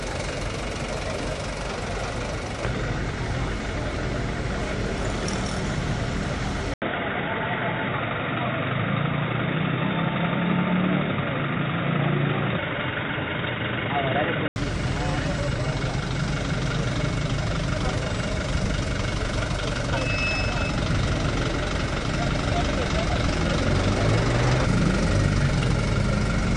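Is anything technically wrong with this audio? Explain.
Yes. From 6.74 to 14.56 s the input was likely switched to a poorer device. After an 80 ms gap, the audio loses everything above 3.7 kHz, turning dull and boxy, with a faint new noise floor and no obvious level jump.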